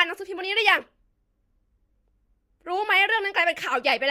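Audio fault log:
Nothing stood out on listening to this speech recording.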